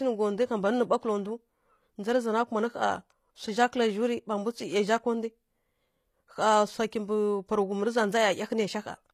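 Speech, with plainly audible coding damage running through the whole clip. The sibilants sound gritty and metallic, and the treble does not sit naturally on the lower voice harmonics. There is no content at all above about 14.9 kHz. This points to HE-AAC compression at a low bitrate, likely around 24 kb/s, where only the lower spectrum is properly coded and the upper bands are regenerated by spectral band replication.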